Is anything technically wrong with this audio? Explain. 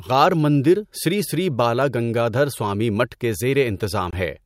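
Yes, there is one fault near the end of the speech. A Bluetooth dropout occurs from about 4.11 to 4.13 s, likely caused by an audio packet failing to reach the headphones in time. The receiver had nothing to play, so the output fell silent for roughly 20 ms, which fits a single missing packet. The sound resumes further along, as though it had kept running through the silence.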